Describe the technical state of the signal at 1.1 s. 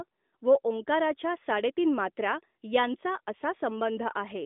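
At 1.1 s the signal is intact, with no fault present, only the narrow telephone band of the AMR narrowband mobile codec, which passes nothing above about 3.8 kHz.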